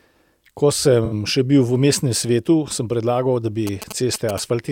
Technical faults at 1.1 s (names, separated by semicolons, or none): AAC frame loss with concealment